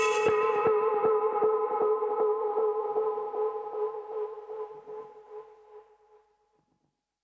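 No technical faults can be heard in this audio.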